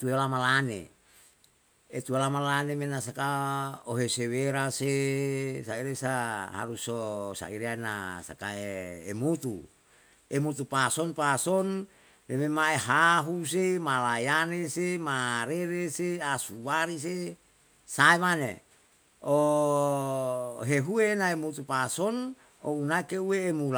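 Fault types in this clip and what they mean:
No technical faults can be heard anywhere in this speech recording. There is nothing to list for it.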